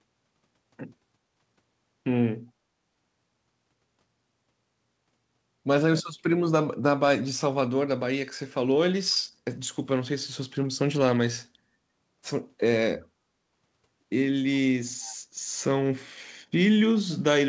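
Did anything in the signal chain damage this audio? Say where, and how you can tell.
Yes, at the call-processing stage. From 15.03 to 15.16 s a faint copy of the speech returns about 388 ms late, well below the direct level. This is likely an echo leak from a far-end canceller. Room reverb would smear immediately rather than repeat after a clear gap.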